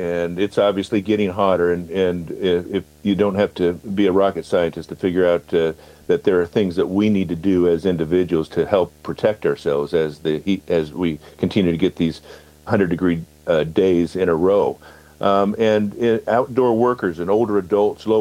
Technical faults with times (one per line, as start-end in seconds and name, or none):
0.00-18.20 video or display buzz